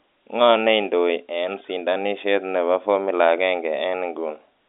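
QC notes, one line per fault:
No faults to note in the speech.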